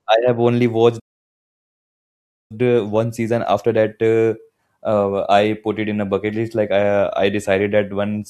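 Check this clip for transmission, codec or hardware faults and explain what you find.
Two playback faults affect this speech clip, a stall followed by a catch-up.

Playback stall, 0.99 to 2.52 s: the player likely starved of data or was blocked, so the speech cuts off mid-flow for about 1.5 s of silence.

Time-compressed catch-up, 2.52 to 5.52 s: the player trims its backlog by splicing out short pieces, so speech runs 1.1 times fast at normal pitch.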